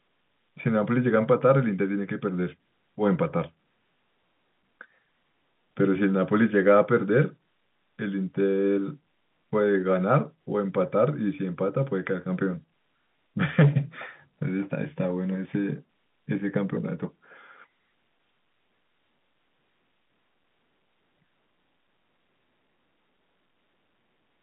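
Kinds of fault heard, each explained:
Nothing stood out on listening; the speech comes through the narrow telephone band with no sound above about 3.8 kHz, as a line of this kind carries it.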